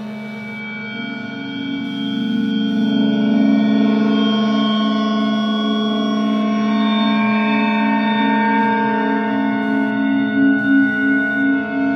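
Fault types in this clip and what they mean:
Computer activity noise: Shifting current draw in the computer's processor, graphics hardware or mouse disturbs the ground shared with the audio circuit, so that activity leaks into the recording. Here it is a faint buzzing chirp pulsing at around 150 Hz, sitting roughly 40 dB below the sounds and running through the whole clip. It follows the machine's workload rather than anything in the recorded sound.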